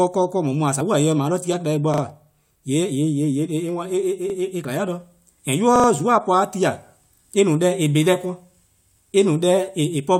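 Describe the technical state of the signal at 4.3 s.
A repeated buffer occurs at 4.30 to 4.34 s: fresh audio arrived late, so the playback device sent the previous 40 ms block a second time. That segment of speech sounds twice with a hard join, heard as a brief stutter, and nothing appears to be skipped.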